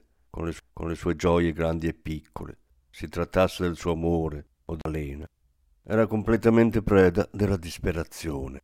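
CD skips at 0.59 s and from 4.81 to 4.85 s: twice a jolt or disc flaw sends the laser onto another turn of the spiral, so playback mutes briefly and resumes elsewhere in the track. The first is a near-instant tick, silent for only a few milliseconds, just before "gioie grandi e piccole". The second, after "del suo amore o", leaves a longer gap of about 40 ms before the speech picks up from a displaced point.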